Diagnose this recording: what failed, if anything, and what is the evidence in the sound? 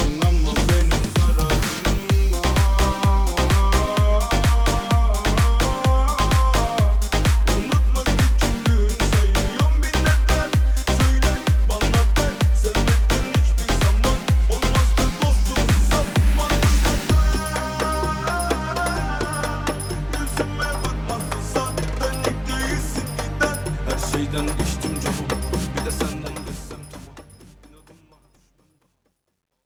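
The failure is truncation distortion on the fade-out, in the digital gain or sample-format conversion stage. From 25.87 s to the end at 29.66 s, the fade loses smoothness as the level drops. The worst stretch runs from 28.03 s to 29.66 s. There the tail turns gritty. The fade was computed at about 11 bits with no dither. Near the bottom, the waveform collapses into a few coarse square steps.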